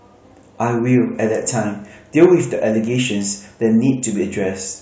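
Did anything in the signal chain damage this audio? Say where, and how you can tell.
Yes. Hard clipping occurs from 2.22 to 2.26 s, in the speech peaks. The level there exceeds what a converter or number-format stage can pass by about 2 dB. The peak tops are sliced flat, adding high harmonics heard as a brief crackle.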